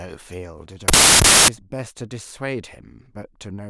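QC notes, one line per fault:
0.88–1.48 s, wrong sample width: 16-bit speech read back as packed 24-bit, so each three-byte value straddles sample boundaries and mostly forms garbage. Loud noise buries the speech, which runs 1.5 times fast and higher-pitched. Byte-order errors would keep normal timing.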